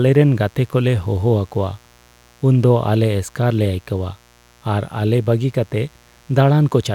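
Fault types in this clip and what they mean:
Mains buzz: a steady, raspy buzz runs under the speech for the whole clip, sitting roughly 35 dB below it. It comes from sharp switching spikes, the kind a dimmer, rectifier or unshielded cable lets in, arriving twice per 60 Hz mains cycle. On a spectrogram it shows as a comb of evenly spaced horizontal lines at multiples of 60 Hz, unbroken through pauses. In the waveform, silent gaps show small repeating spikes every 8.3 ms.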